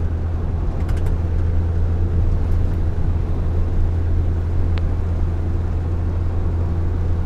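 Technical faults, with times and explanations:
4.78–4.80 s, loud pop: a single sharp pop, roughly 10 dB above the surrounding sound, which carries on underneath; likely a brief voltage pulse from a plug, switch or static discharge.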